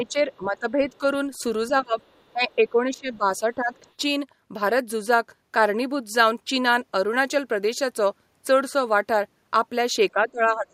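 From the start to 1.02 s, and again from 1.69 to 1.96 s, the speech dips in level, by around 10 dB and then around 20 dB. This is speech suppressed in double talk, likely from an echo canceller that could not separate the talker from the far end during overlap and attenuated both.

Between 2.01 and 2.32 s a faint second voice sits underneath, around 40 dB below the speech. This is the other side's voice leaking through, likely residual loudspeaker echo that the canceller failed to remove from the microphone.

From 2.33 to 3.73 s the speech is suppressed in double talk again, dropping by around 15 dB. That is likely the same canceller clamping down while both sides were active.

Within that stretch, at about 2.51 to 2.55 s, a brief scrap of the other side's voice leaks through, again around 40 dB down. This is likely more uncancelled echo.

From 10.12 s to the end the speech is suppressed once more, this time by around 25 dB. 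The cause is likely the same double-talk attenuation.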